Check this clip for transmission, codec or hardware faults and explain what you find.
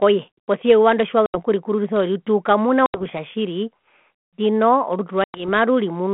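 Three transmission faults, all packet loss on an ADPCM call. Hard-edged silent gaps open at 1.26 s (after "posia eyuva ndo"), 2.86 s and 5.24 s, lasting 80 ms, 80 ms and 100 ms. Each ends with some distortion as the G.726 32 kbit/s speech resumes. A few packets were lost each time, and the decoder's predictor and step size drifted from the sender's before resettling.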